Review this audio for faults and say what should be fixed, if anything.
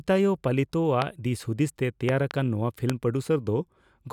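A voltage spike, likely from a switch, plug or static, breaks into the chain, giving loud pops high above the speech at 1.02–1.04 s, 2.09–2.33 s (two) and 2.90–2.92 s. Secure and ground connections, and avoid switching gear or touching cables while recording.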